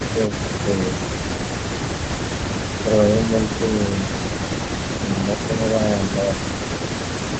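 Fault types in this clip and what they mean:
Speech suppressed in double talk: from 4.09 to 4.18 s the voice ducks about 15 dB, likely the echo canceller clamping down while both sides talked.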